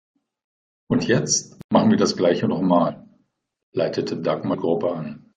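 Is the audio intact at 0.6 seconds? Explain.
Yes, the speech at 0.6 s is intact, with no dropout, click, distortion or other fault at that moment.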